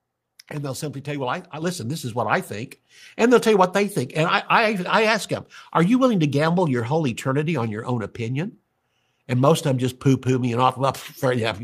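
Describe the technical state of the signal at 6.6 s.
At 6.6 s the speech signal is intact, with no technical fault present at that moment.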